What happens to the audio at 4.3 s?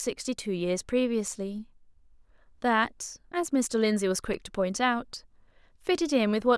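A sharp tick cuts through the speech at 4.34 s: for about 5.3 ms the signal drops to silence and then snaps back, with no fade on either side, so the two hard edges merge into one click rather than an audible hole. This is a block of digital silence. A short run of samples was left as zeros, most likely because the output buffer wasn't filled in time, and the gap's length fits a 128-sample buffer.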